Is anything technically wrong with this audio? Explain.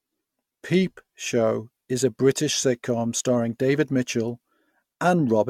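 Yes. The speech shows generation loss from start to finish. Everything above 17.2 kHz is missing, and the sound is swirly, smeared and hollow, with softened consonant attacks. The likely cause is repeated lossy encoding, consistent with AAC-LC at around 96 kbit/s applied roughly seven times over. Each decode and re-encode lands on a shifted frame grid and quantises again, so noise and spectral gaps accumulate beyond what a single pass at that bitrate would produce.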